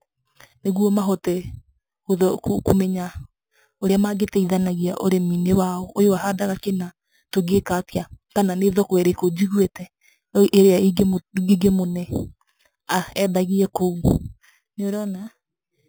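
Throughout the speech there is imaging from sample-and-hold upsampling. The content stops at 4 kHz, pointing to an 8 kHz original, with samples repeated unsmoothed. A mirrored copy fills 4 to 8 kHz about 21 dB down. Unlike steady hiss, this metallic fizz tracks the speech level and moves opposite to its pitch.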